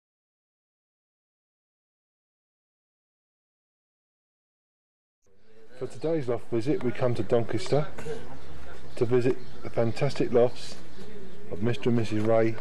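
No technical fault can be heard anywhere in this audio. Nothing in the sound calls for a time or a cause to be noted.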